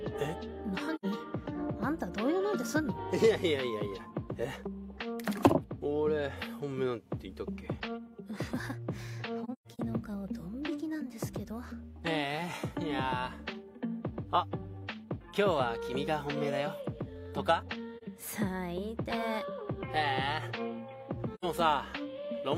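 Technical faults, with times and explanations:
0.95–1.06 s, 9.44–9.79 s, 17.97–18.03 s, 21.34–21.45 s: AAC frame loss with muting. The sound fades to silence for about 40 to 85 ms, or for scattered gaps over 0.34 s near 9.4 s with the longest around 150 ms. The missing spectrum is zeroed and overlapping windows taper the edges. On a spectrogram each gap is a soft-edged blank vertical band, and on the waveform the envelope shrinks to near silence and returns without a spike.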